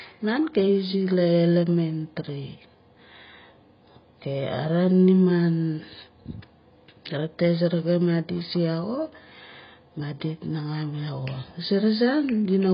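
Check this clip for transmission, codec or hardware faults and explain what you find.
Heavy codec damage runs through the whole speech clip. Throughout, the sound is dull and smeared, with nothing above 5.3 kHz, and sibilants and sustained vowels take on a warbling, fizzy texture. This is likely AAC compression (AAC-LC) at a very low rate, which fits a bitrate around 16 kbps. Short of bits, the encoder drops the upper band entirely and quantises what remains so coarsely that the spectrum breaks into shifting gaps.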